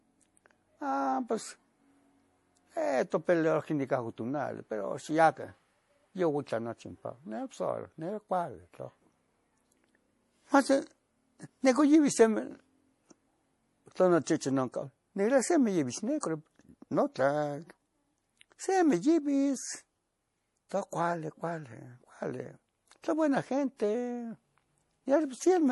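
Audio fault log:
throughout: MP3 compression. The speech has a plainly audible watery, swirly quality. Nothing sounds above 11.5 kHz, so s sounds lose their top, and they also turn metallic. This points to a tightly starved encoder, likely MP3 near 48 kbps, cutting treble and dropping weak detail.
16.20–16.23 and 20.69: pre-echo. Before each sharp attack comes a brief hiss, spread over 27 ms and then 19 ms. The codec spread its noise across a whole block, filling the quiet gap before the onset. Both attacks sound softened.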